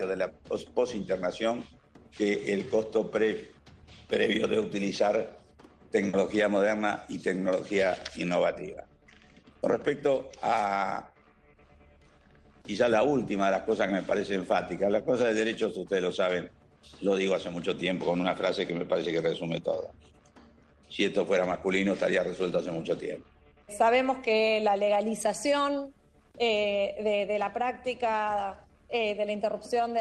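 No faults are present; the audio has come through a call path whose coding sounds consistent with Opus, with the top end rolled off around 12 kHz as expected for that setting.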